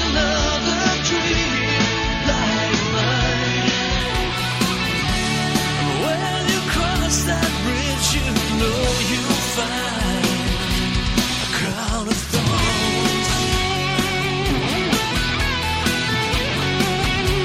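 From 0 to 4.0 s, the adaptive stream is starting at a low bitrate. Nothing sounds above 6.9 kHz, which fits roughly 24 kbit/s AAC. Fuller treble then arrives abruptly, without a gap.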